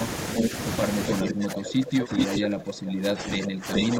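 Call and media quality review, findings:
Echo leak: delayed copy of the speech at 0.34–0.49, 1.07–1.14, 2.19–2.38 and 3.73–3.84 s, lagging 417 to 426 ms and roughly as loud as the live talker, a bit louder at 2.19 s. Likely the far end's speakerphone echo canceller letting loudspeaker pickup back into its mic.

Speech suppressed in double talk: from 1.22 s to the end, the talker dips in chunks, down about 20 dB at worst, roughly 3 s affected in total. Likely the same canceller, unable to tell talker from echo, ducking both while the other side speaks.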